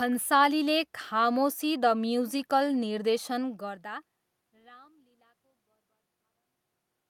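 Nothing stood out as a technical fault on listening; the level change near 3.5 s sounds like the talker moving relative to the microphone, and the gradual fade-out from around 4 s to the end is a smooth edit with no hard edge.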